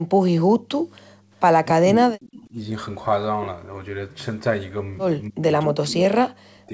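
Speech over a call path, band-limited to 8 kHz as G.722 would be. From 0.96 to 1.01 s a very faint delayed copy of the voice surfaces, about 0.27 s late. That is an echo leak. The far side's echo canceller likely let residual loudspeaker sound through. From 1.13 to 1.3 s the room sound dips by about 15 dB and then returns. This is background gated by the echo canceller, which clamped the microphone while its loudspeaker played. From 1.7 to 2.56 s, and again from 5.29 s to the end, the voice drops away in pieces, sometimes almost to silence. This is speech suppressed in double talk. The canceller likely heard both sides at once and turned the talker down with the echo.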